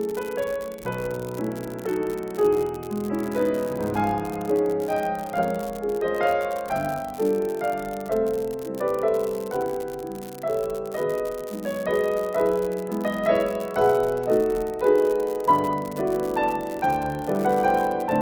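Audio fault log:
Throughout: unreliable data bit. A single bit line in the sample data is not being read reliably, so in a random fraction of samples that bit comes out wrong. Each wrong sample jumps by the same fixed step, about -19 dBFS. These scattered, equal-sized spikes fuse into a steady crackle or fizz. It does not follow the level of the sound. It carries on through the pauses as well.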